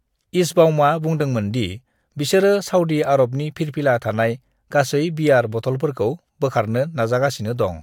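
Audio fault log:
Nothing to log here; I listened closely and didn't catch a single fault anywhere in the speech.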